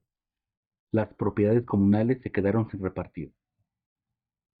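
No technical faults can be heard anywhere in the audio.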